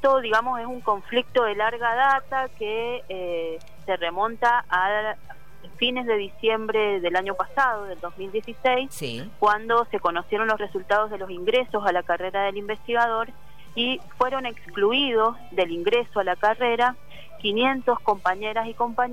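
Corrupt frame decoded at 2.17–2.20 s and 8.74–8.76 s: a few damaged compressed frames were played anyway, so misread gains and codes scatter energy to wrong frequencies, giving short chirpy bursts, the second louder, peaking near about -15 dBFS.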